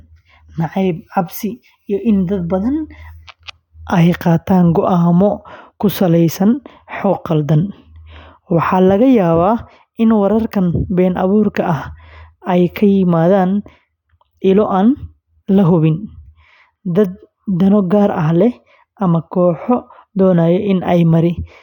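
Listening to this speech recording, nothing stood out as a technical problem at any point.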